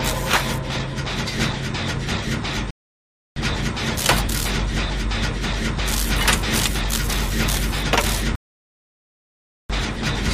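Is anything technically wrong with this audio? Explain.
Yes. There are two rebuffering stalls, from 2.71 to 3.36 s and from 8.35 to 9.70 s. Playback ran out of downloaded audio and waited for more. The sound drops to silence, then resumes exactly where it stopped. Nothing is skipped, but about 0.66 s and 1.34 s are added.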